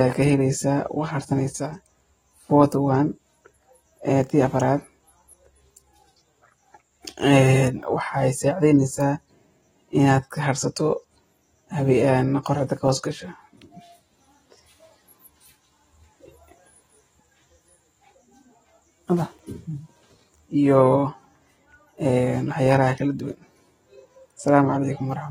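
From start to finish the speech sounds dull and smeared, with a warbly, fizzy edge on sibilants and nothing above 16.5 kHz. That's likely AAC compression, where quantising against a hearing model thins the spectrum, fitting a low bitrate around 24 kbps.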